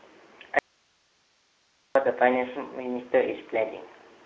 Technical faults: Speex codec; audio dropout to a faint residue

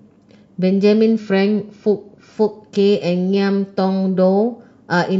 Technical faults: drift correction step

